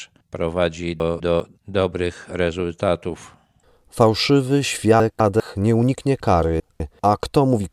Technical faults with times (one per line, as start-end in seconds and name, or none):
1.00-1.40 chunks out of order
5.00-5.40 chunks out of order
6.60-7.00 chunks out of order